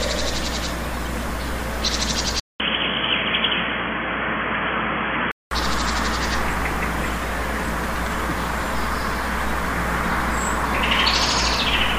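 A recording of everyday sounds carries mains hum for its whole length, most likely from a ground loop or a nearby transformer letting the 60 Hz power line leak into the signal path. The result is a steady low tone at 60 Hz with a few low harmonics above it. The hum is strong, sitting only a few decibels below the sound itself, so it stays plainly audible beneath everything in the clip. From 2.40 s to 5.51 s, the input was likely switched to a poorer device, such as another microphone or a headset running its narrowband call profile, and then switched back. There is a gap of about 200 ms at the switch. The sound then turns dull and boxy, with nothing above 3.3 kHz, and a faint new background noise appears roughly 40 dB under the signal. The overall level stays about the same, and full bandwidth returns at 5.51 s.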